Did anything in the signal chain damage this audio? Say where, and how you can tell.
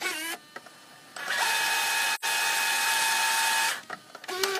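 Yes. AAC frame loss with muting at 2.14 to 2.25 s, in the codec stage. The sound fades out and back in around a gap of roughly 85 ms, which fits two lost AAC frames. With no data for those frames, the decoder filled their spectrum with zeros. The overlapping transform windows on either side then tapered the signal down and up, so the hole has soft edges rather than the hard cut a sample-level dropout would leave.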